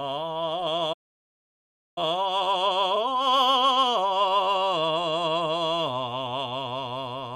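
At 0.93 s the music cuts out mid-phrase. Silence follows for about one second, until 1.98 s. This is a playback stall. The likely cause is that the player ran out of buffered data, or its audio thread was briefly blocked. Nothing reached the output during that gap. The music then resumes from the point where it stopped.

From 1.98 s to 4.98 s comes a time-compressed catch-up. The player is clearing the backlog the gap created. It drops small slices of audio and cross-fades across the joins. The music runs about 1.25 times faster than normal, but the pitch stays where it should be. The tempo sounds hurried. At 4.98 s the music returns to its proper pace.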